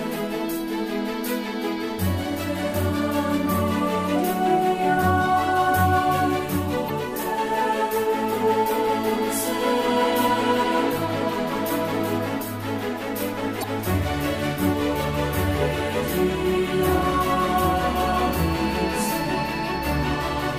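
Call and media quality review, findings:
Damaged data in a compressed stream, 6.86–6.90 s and 13.60–13.64 s: two brief glitches, each about 44 ms. Probable component: decoder input. Corrupted bytes break frame parsing; the decoder loses sync and resyncs at the next frame header.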